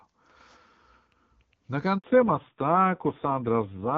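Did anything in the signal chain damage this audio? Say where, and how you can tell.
Yes. At the network stage, a handover gap at 1.98 to 2.04 s: the call switched links and no speech frames arrived for 60 ms. The speech decays within a few tens of milliseconds and drops to silence until the new link starts delivering audio.

From 2.04 s to the end there is a codec-stage fallback to narrowband. The call left AMR wideband (HD Voice), whose clear, wideband speech is heard before the break, and nothing above 4 kHz survives. The speech turns dull and raspy, which fits AMR-NB at about 5.9 kbit/s.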